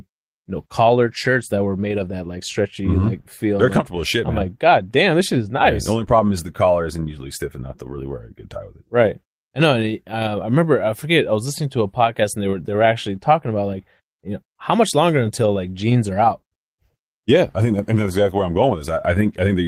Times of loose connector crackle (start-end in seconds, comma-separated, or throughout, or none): none